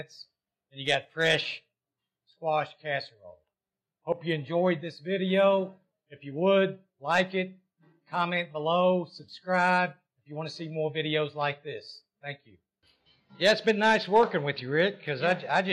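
No faults are audible anywhere in the clip.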